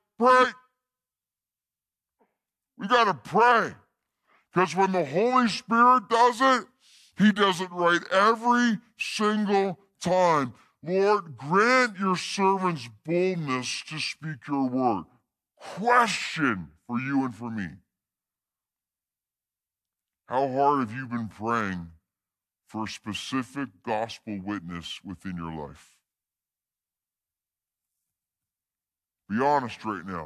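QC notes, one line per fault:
Throughout: wrong sample rate. Everything runs at about 0.73 speed and sits 5.5 semitones low, which fits 44.1 kHz audio played back at 32 kHz.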